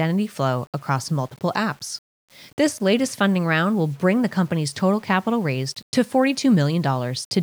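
Low bit depth without dither runs throughout the speech, likely from rounding to about 7 bits with no dither. The rounding error tracks the signal, so quiet passages turn gritty and sounds below one step drop out or sputter between steps, leaving grainy distortion only roughly 35 dB below the speech.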